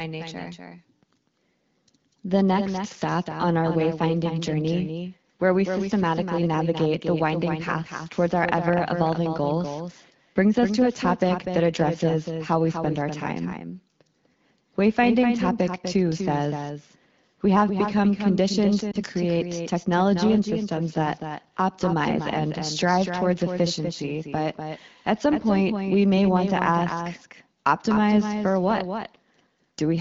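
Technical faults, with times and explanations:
Throughout, doubled audio track: a clean, undecayed echo of the speech trails roughly 300 ms behind, about 5 dB quieter, likely from a second capture path mixing in late.
18.92 to 18.97 s, lost AMR speech frame: a brief dip and warble, which fits one missing 20 ms frame the AMR-WB decoder patched from the previous frame's settings at reduced gain.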